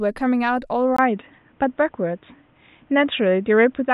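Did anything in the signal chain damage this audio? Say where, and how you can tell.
Yes. At 0.97 s, after a 20 ms silence, the speech turns boxy, loses everything above 3.8 kHz, shifts level by about 5 dB and gains new noise about 40 dB down. The likely cause is an input switched to a poorer device. A codec bandwidth drop wouldn't bring new noise.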